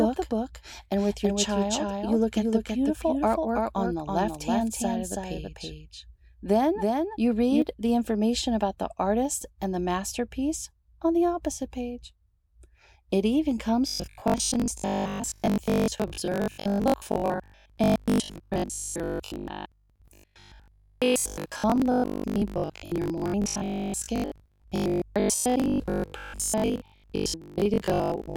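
A doubled audio track runs from the very start to 7.62 s, already under way when the clip opens. A second full-band copy of the speech trails the original by roughly 300 ms at about 5 dB lower, with no reverberant tail or room colouring, so each syllable gets a flat, distinct slapback echo. It is likely caused by the same signal being captured again through a slower path, or by two out-of-step copies left in an edit. At 7.62 s the copy stops abruptly.

Robotic sound from repeated short buffers sets in at 13.88 s and continues to 28.36 s. The voice becomes a rigid, metallic buzz pitched at 50 Hz, which still loosely tracks the syllables. The likely cause is audio arriving too infrequently, so the software keeps replaying the most recent 20 ms chunk while the real signal in between is discarded. That repetition rate of one over 20 ms produces the fixed 50 Hz tone, and most of the audio in this stretch is repeated rather than new.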